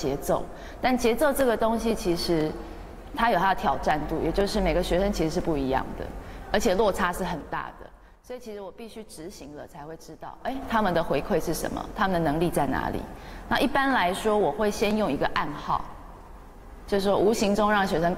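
From 6.93 to 8.32 s the level falls by roughly 15 dB in 3 dB jumps, about four a second, producing zipper noise: each unsmoothed step adds a small click, so a slow ticking rides on the fade. From 10.30 to 10.67 s it rises by a similar amount, stepping far faster, around fifteen times a second, into a brief zip. The waveform envelope shows a staircase, and the spectrogram shows thin vertical broadband lines at each step.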